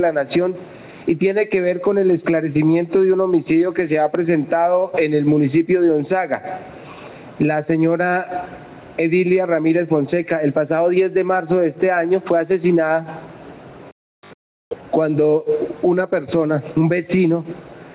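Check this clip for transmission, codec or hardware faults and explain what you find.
There's one real problem, gain pumping, running the whole way through. The input gain is likely set far too high, so a fast limiter keeps clamping it, with the gain swinging by around 10 dB. The narrow, 4 kHz-limited top end just reflects the call codec, which fits G.711 mu-law.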